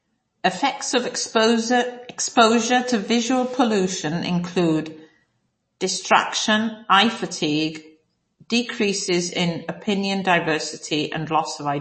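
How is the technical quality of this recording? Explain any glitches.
The recording is noticeably degraded throughout by compression. MP3 compression runs the whole clip and is the likely cause of the damage, which is plainly audible and fits a low bitrate around 32 kbps. Starved of bits, the encoder cuts off all treble above about 8.3 kHz and drops weaker frequency lines, which flicker on and off between frames. The speech therefore sounds dull and watery, with a swirling, metallic edge on s sounds and softened, smeared consonant onsets.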